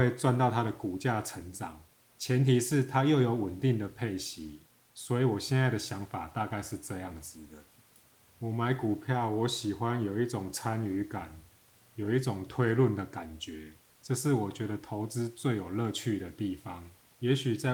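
Speech with no technical faults.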